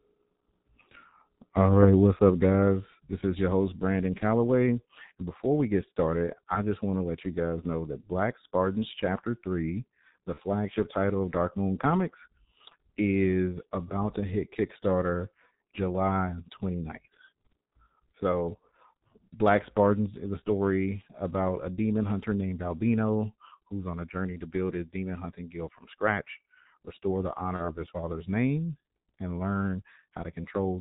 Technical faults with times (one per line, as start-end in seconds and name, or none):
0.00-30.81 G.723.1 codec
10.34-10.40 VoIP packet loss concealed by the speech codec
27.56-27.76 VoIP packet loss concealed by the speech codec